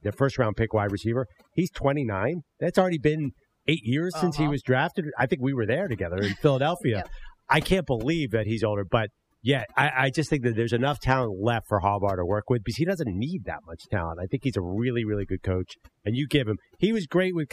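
Overdone noise removal runs throughout: an over-aggressive noise reducer gates bands near its noise estimate, leaving near-silent gaps with twinkling specks and taking quiet parts of the voice along with them.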